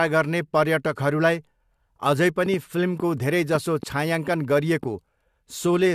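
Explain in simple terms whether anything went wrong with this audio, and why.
A train of clicks runs from 2.46 to 4.84 s: about seven sharp ticks at an uneven pace, roughly 2.5 per second, heard over the speech and in its pauses. They likely come from electrical interference or a faulty connection or power supply injecting brief pulses.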